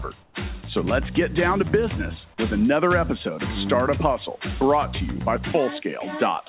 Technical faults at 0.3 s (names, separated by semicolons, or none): comfort noise in place of the background